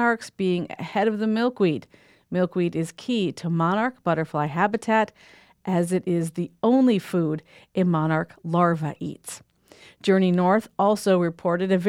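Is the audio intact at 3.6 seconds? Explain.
Yes, the speech at 3.6 seconds is intact, with no fault at that moment.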